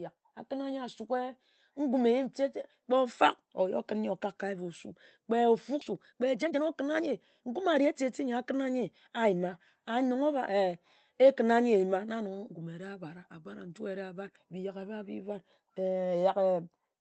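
At 5.81 s there's a skip ahead: about a second of speech just isn't there, and playback jumps straight across with no gap or fill. That fits a chunk of audio being thrown away, in transit or by an overflowing jitter buffer, while later audio was already queued up.

Right after, from 5.91 to 9.40 s, you get a jitter buffer speed-up. The buffer was holding too much, so it kept trimming tiny pitch-period slices, about 0.4 s in total, and the speech runs about 111% fast at the same pitch, sounding a bit rushed. Underneath it all the call codec's coding noise and top end stop near 8 kHz, which points to something like Opus at around 24 kbps.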